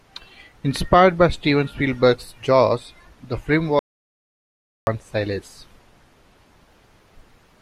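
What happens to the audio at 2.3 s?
Nothing goes wrong at 2.3 s; the speech carries straight through that moment intact, with no dropout, click or distortion.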